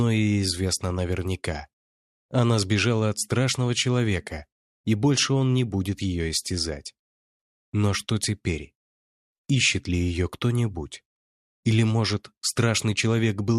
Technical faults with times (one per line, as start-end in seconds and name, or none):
none